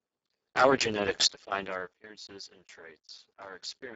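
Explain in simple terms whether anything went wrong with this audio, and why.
The whole recording suffers from heavy Speex codec damage: the speech sounds hoarse and noisy, with nothing above 7.7 kHz, from squeezing it into very little data.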